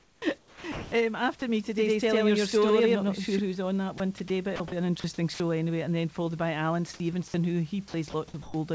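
Right from the start, 0 to 0.92 s, the speech is likely being chopped by the voice detector: it keeps switching sending on and off, so about 0.68 s of that stretch becomes comfort noise and the opening sounds choppy.

Just after "who's on that", at 3.98 to 4.00 s, and again at 4.28 to 4.30 s, the voice detector likely dropped sound, taking speech for background and stopping. A 20 ms patch of steady noise replaces it each time.

At 4.56 to 4.72 s the detector likely chops again, swapping about 80 ms for fill.

More likely drops follow at 5.00 to 5.04, 5.34 to 5.40 and 8.10 to 8.14 s, each losing a few tens of milliseconds of speech to flat noise.

Last, from 8.42 to 8.54 s, comfort noise replaces the background, likely because transmission paused while no speech was detected. The textured room noise becomes a smooth, featureless hiss about 1 dB quieter, sitting roughly 22 dB under the loud parts.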